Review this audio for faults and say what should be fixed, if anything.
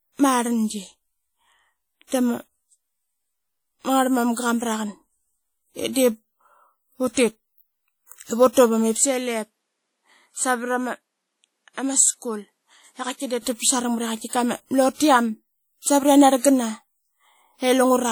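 Plainly audible codec damage runs through the whole speech recording. It sounds like WMA compression. The likely cause is a transform codec working in long blocks. Its quantisation noise smears across tens of milliseconds, and weak spectral lines drop out. The result is a ringing, washy quality with hiss that rises and falls with the speech. The damage fits a low bitrate near 48 kbps. The band itself reaches about 20.1 kHz. To prevent it, record and deliver at a higher bitrate or in a lossless format.

From 8.97 s to 13.42 s the tone changes abruptly. The likely cause is an input switched to a poorer device. The band stops at 12.5 kHz in this stretch, so the speech turns duller. The level drops by about 5 dB. A new noise floor appears, roughly 55 dB below the speech. There is no gap at either switch. Full brightness returns at 13.42 s. To prevent it, lock the recording input so the system cannot change devices mid-take.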